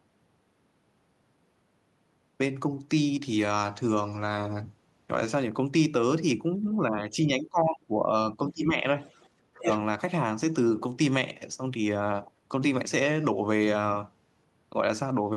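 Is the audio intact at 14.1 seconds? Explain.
Yes, at 14.1 seconds the speech plays through intact, with no audible fault at that moment.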